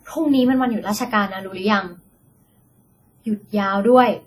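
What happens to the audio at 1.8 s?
At 1.8 s the speech sounds ringing and washy, with a hiss that swells and falls with the signal, as it does throughout. This is likely heavy WMA compression at a low bitrate, around 32 kbps: long transform blocks smear quantisation noise over tens of milliseconds, weak spectral lines drop out, and nothing remains above 19.8 kHz.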